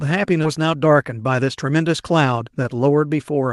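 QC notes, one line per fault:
0.43–0.45 s, skip ahead: The speech jumps forward with no gap filled in. Roughly 0.7 s of audio was dropped, likely because the jitter buffer overflowed with later packets already waiting. The two sides join almost directly, so the sound lurches abruptly.
0.57–1.80 s, jitter buffer speed-up: The speech runs at 108% speed but keeps its pitch, so it sounds hurried. The buffer held more audio than its target. To shrink that delay, it cut short pitch-period pieces repeatedly, removing about a tenth of a second in total.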